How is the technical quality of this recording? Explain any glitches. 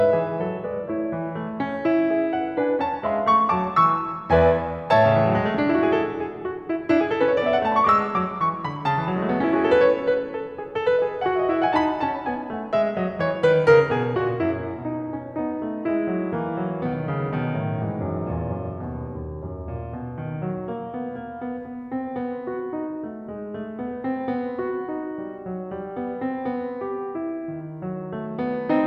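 No glitches turn up anywhere in this music recording. Nothing breaks in, drops out or disturbs the sound at any point.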